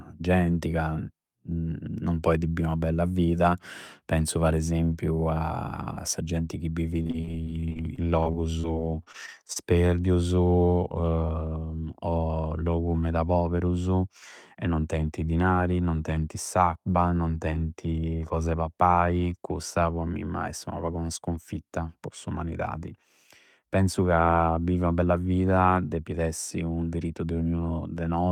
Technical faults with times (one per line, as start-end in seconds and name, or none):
6.97-9.58 repeated packet loss (robotic sound)